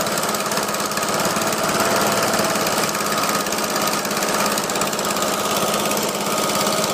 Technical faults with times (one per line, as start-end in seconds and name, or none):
1.72-1.74 loud pop